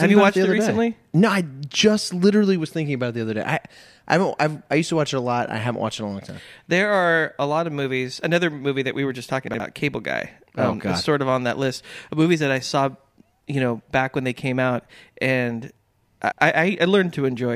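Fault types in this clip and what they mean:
chunks out of order: 60 ms chunks play late, after those meant to follow. At 9.48 s and 16.2 s, short jumbled moments.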